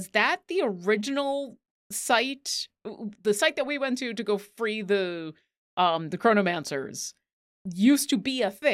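Nothing technical goes wrong anywhere in this short bit of speech; there's simply no fault to point to.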